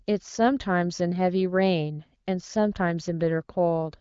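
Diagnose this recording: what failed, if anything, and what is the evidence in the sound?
Nothing has failed: the speech carries the band limit and texture of an AMR wideband (HD Voice) codec at a mid-to-high rate, with no content above 7.5 kHz, and no stage in the chain shows a fault.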